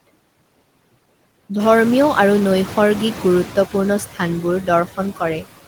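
Noise suppressor artifacts run through the whole speech clip. The suppressor pulls down each frequency band it judges to be steady noise, frame by frame, by about 17 dB. So the background dips in the pauses and swells back under the speech.

Around one and a half seconds in, the room noise jumps by about 12 dB. From 1.59 to 3.49 s the noise suppressor is catching up. Its noise estimate still reflects the quieter background, so it cuts the new noise by only about 6 dB. The louder noise comes through with less reduction at first. It then sinks over about 1.9 s as the estimate adapts. After that, the room noise sits about 14 dB below the speech.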